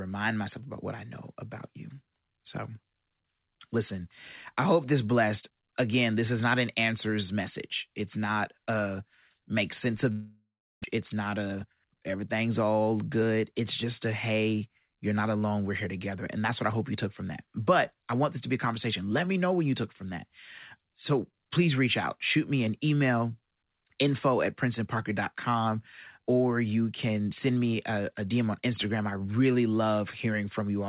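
At 10.12 s, just after "not a make sense", the speech breaks off in a long network dropout, likely from packets arriving late. The last sound smears into a fading buzz or hiss, then 0.32 s of silence. About 0.6 s is lost before sound resumes at 10.86 s.

From 10.97 s to 11.95 s, a jitter buffer speed-up follows. The receiver trims tiny pitch-period slices to shed about a tenth of a second of built-up delay. Speech runs 110% fast at unchanged pitch, sounding hurried into "everything's all good".

Throughout, the call path cuts off everything above 4 kHz, which fits G.711 A-law telephone coding.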